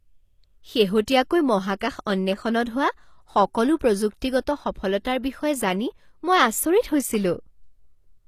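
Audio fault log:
throughout — HE-AAC compression: the speech has a bright but synthetic-sounding top end, with sibilants coming out gritty and metallic, and nothing above 14.9 kHz. Unlike a plain low-pass or band-limited codec, the treble is present, but it is rebuilt from copied lower bands, so its harmonics don't align with the body of the voice. The damage is plainly audible, which fits a likely low bitrate around 24 kbps.
1.06–1.08, 1.80, 3.76–3.81 — pre-echo: a brief hiss smears in just ahead of sharp onsets, lasting about 20 ms, 17 ms, and 48 ms respectively. The last one comes right before "প্ৰযুক্তিগত সফলতাৰ". The codec spread quantisation noise across a block that contained a loud attack, so noise leaks into the quiet moment before it. That ordering is what distinguishes it from reverb or smearing after a transient: the noise arrives first and the attack sounds softened.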